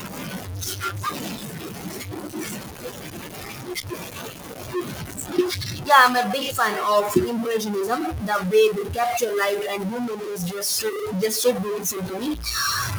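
A grainy, gritty distortion runs through the whole clip. It moves with the speech. The error is roughly as loud as the speech itself. Quiet stretches sputter or fall to silence. This likely comes from low bit depth without dither. The sound fits about 4 bits, with values truncated rather than rounded. With so few steps, the error tracks the signal instead of forming a steady hiss.

Speech cut by the noise suppressor also recurs. The suppressor mistakes parts of the speech for noise and turns them down. The first stretch runs from 0.0 to 5.89 s and drops as much as about 17 dB. Most of those six seconds sound swallowed. Shorter cuts follow at 6.14 to 6.84 s (about 12 dB) and 7.04 to 8.53 s (about 11 dB). Another runs from 8.72 to 12.57 s (about 13 dB). A brief one at 12.83 s reaches the end (about 8 dB). Room noise sits about 23 dB below the speech.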